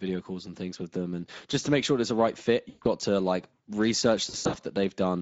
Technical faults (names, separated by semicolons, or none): Speex codec; VoIP packet loss concealed by the speech codec